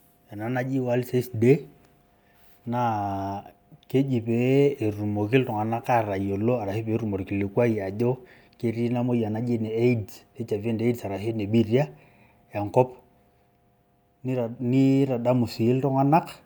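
Listening to this recording of speech, nothing stood out as a technical problem at any point.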